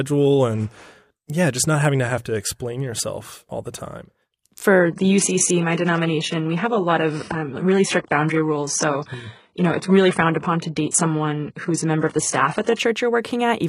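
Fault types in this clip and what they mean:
Adaptive stream at a lower bitrate: the stream switched to a lower-bitrate version. From 4.79 to 12.79 s the speech turns abruptly, with no gap, duller, with nothing above 11.1 kHz, which fits an HE-AAC stream near 12 kbit/s.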